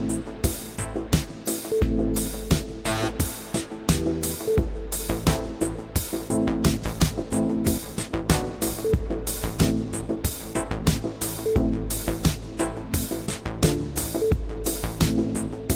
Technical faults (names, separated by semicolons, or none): skip ahead; jitter buffer speed-up